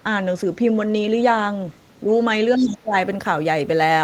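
From 1.69 to 1.78 s, a very faint second voice sits far below the speech. A louder one returns from 2.56 to 2.75 s, roughly 20 dB down. This is the other side's voice leaking through. Its likely cause is loudspeaker echo the canceller failed to remove.

From 2.58 to 2.94 s, the main speech drops sharply, by roughly 25 dB at its deepest, for about 0.4 s. This is speech suppressed in double talk. Both sides overlapped, and the echo canceller likely turned the talker down along with the echo.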